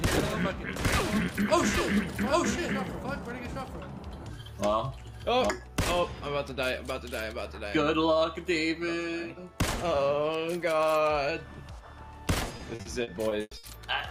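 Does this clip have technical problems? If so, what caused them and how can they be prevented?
Yes. A doubled audio track runs from the start to 5.5 s: an equally loud copy trails roughly 0.7 s behind, likely from a second, slower capture path. Prevent it by routing the source through only one capture path.

Repeated packet loss (robotic sound) covers 12.57 to 13.65 s: seven holes, the longest 100 ms, are patched by stretching the preceding sound, giving choppy audio. Prevent it with a steadier network connection and a larger jitter buffer.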